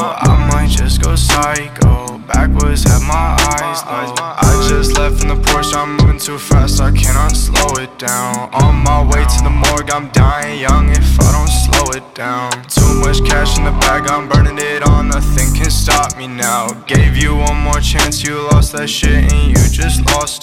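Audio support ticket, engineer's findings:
No audio faults found in the clip; nothing to report for this ticket.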